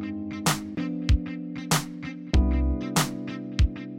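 No technical faults can be heard anywhere in the audio.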